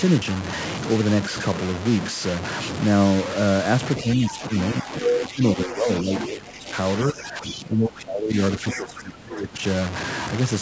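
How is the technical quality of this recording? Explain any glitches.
The recording has poor technical quality. A coarse, gritty distortion runs through the whole clip, and the speech repeatedly sinks in level from about 4 s onward.

Low bit depth without dither is present from start to finish. The speech is grainy and harsh, and quiet passages and word tails break into sputtering steps. The grit sits only roughly 10 dB beneath the speech and moves with it. The likely cause is rounding by truncation to very few bits, probably around 4, with no dither to smooth the error into steady noise.

Speech suppressed in double talk occurs at 4.02–4.51, 4.83–5.43, 5.66–6.11, 6.27–6.75, 7.12–8.36 and 8.58–9.59 s. In each stretch the speech ducks, dulls or breaks up. The shallowest dips are mild, and the later ones, especially after 8.58 s, are deep. This likely comes from a call's echo canceller that heard both sides at once, could not separate the talker from the loudspeaker, and turned the microphone down.

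The other side's voice leaking through appears at 4.31–4.37 s, inside the first suppressed stretch. A brief, faint second voice slips in, well below the main speech. It is a loudspeaker playback that was picked up by the microphone and survived echo cancellation. The scrap is short, consistent with residual echo that the canceller mostly, but not fully, removed.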